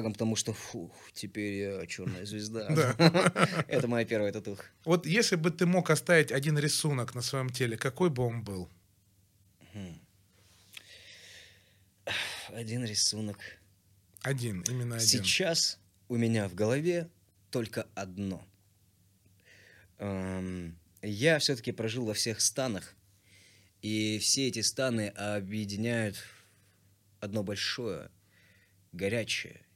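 A recording of speech with nothing technically wrong that a listener would pick up on anywhere along the way.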